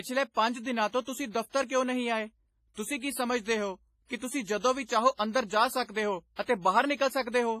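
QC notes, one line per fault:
Throughout, WMA compression: the speech has a ringing, washy quality, with a hiss that swells and fades along with the signal, and nothing is present above 15.3 kHz. The cause is likely a transform codec of the WMA 1 kind at a low bitrate, which the heavy damage suggests is around 24 kbps. Long transform blocks smear quantisation noise across tens of milliseconds around each sound, and weak spectral lines get zeroed.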